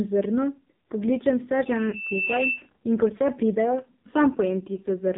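A short speech recording carried through the AMR narrowband mobile codec, with heavy coding damage throughout. Nothing above 4 kHz survives, and the voice has the buzzy, synthetic edge of a vocal-tract model driven by sparse pulses. That texture, which points to one of the low AMR-NB modes near 5.9 kbps, separates it from a plain telephone-band filter, which would dull the top end but leave the voice natural rather than buzzy and artificial. At 1.90 to 1.94 s the sound briefly dips or warbles, the mark of lost AMR speech frames. The length of the gap points to a single dropped 20 ms frame. The decoder covers the hole by reusing the previous pitch and vocal-tract settings at reduced gain, then recovers weak or rough for a moment. That smeared, still-voiced fill distinguishes it from a packet dropout that leaves hard silence or a click.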